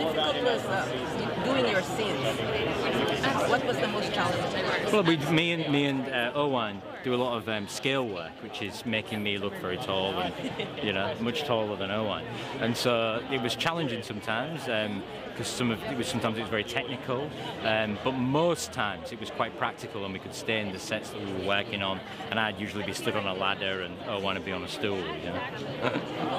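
Nothing technical goes wrong anywhere in the recording, so there's no fault to point to at any moment.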